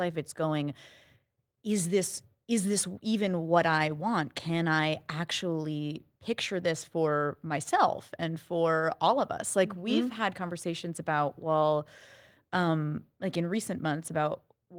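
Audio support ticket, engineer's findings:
Engineer's findings: no audio fault found on this ticket.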